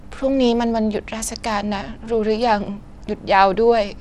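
Throughout, the speech sounds gritty, with nothing above 17.3 kHz. The likely cause is Bluetooth SBC compression, coarsely quantising its sub-bands at a bitrate near 96 kbps.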